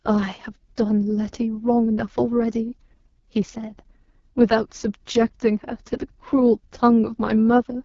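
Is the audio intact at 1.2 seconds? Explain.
No. At 1.2 seconds, as across the whole clip, the speech carries AMR wideband (HD Voice) codec damage, and it is heavy. The codec models the vocal tract with pulse excitation up to 6.4 kHz and pads the band above with shaped noise, so nothing remains above 7.3 kHz. Here the speech sounds rough and raspy, which points to the lowest rate, around 6.6 kbit/s, where the coarse excitation cannot track the voice closely.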